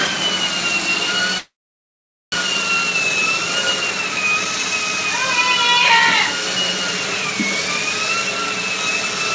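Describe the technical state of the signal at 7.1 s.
At 7.1 s the signal is intact, with no dropout, glitch or distortion, only the steady band limit of the G.722 call path, which leaves nothing above 8 kHz.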